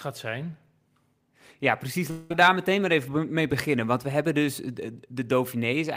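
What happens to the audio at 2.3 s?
Between 2.10 and 2.32 s the speech gives way to a fading, buzzy continuation of the last sound, then resumes with about 200 ms missing, most likely a long network dropout. On a spectrogram, frozen, smeared bands decay, with no silent gap, before an abrupt restart.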